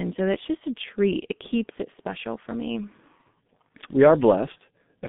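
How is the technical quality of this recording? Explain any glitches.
Quality is poor, with heavy G.723.1 codec damage throughout. The speech is confined to roughly 150 Hz to 3.6 kHz and sounds muffled and hoarse, with smeared consonants. Plain band-limiting would not cause that roughness, which comes from a slowly updated voice model and fits a bitrate near 6 kbit/s.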